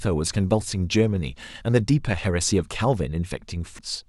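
A speech clip with compressed frames skipped at 3.79 s: about three 92.9 ms frames, roughly 300 ms, drop out, so the audio jumps ahead at that point.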